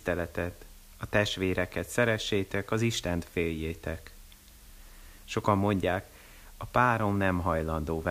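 From start to finish, the speech has been reduced to a very low bit depth with dither, which fits an 8-bit signal. Dither added before rounding turns the coarse quantisation error into steady white noise, heard as a constant, even hiss roughly 30 dB below the speech, with no distortion.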